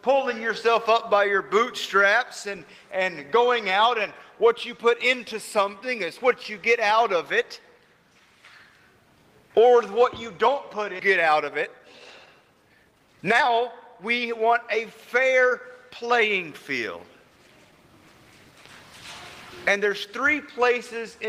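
At 10.99 to 11.01 s the sound jumps abruptly forward with no gap. This is a skip ahead: roughly a second and a half of audio was dropped and the two sides spliced together.

From 11.17 to 11.80 s the sound runs slightly fast at an unchanged pitch (107%), then clearly hurried from 12.26 to 16.18 s (117%), then slightly fast again from 16.97 to 18.13 s (107%). This is a jitter buffer speed-up, in which the receiver trimmed short pitch-period pieces to shed excess buffered delay, removing well over half a second in total.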